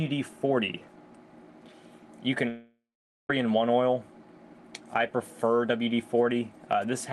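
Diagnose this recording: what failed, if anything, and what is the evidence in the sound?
The fault is at the network stage, likely a long network dropout. From 2.48 s to 3.3 s the sound turns into a fading buzz extrapolated from the last received audio, then settles into silence for roughly half a second. When the signal returns, about 0.81 s of material is missing.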